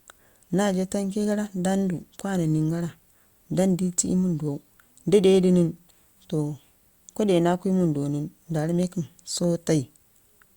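No technical faults are audible.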